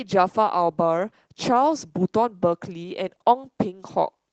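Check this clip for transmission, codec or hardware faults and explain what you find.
One codec fault runs through the whole speech clip: Opus voice compression. Hybrid coding, with linear prediction below 8 kHz and a transform layer above, fits roughly 16 kbps, leaving speech audibly hoarse and slightly robotic.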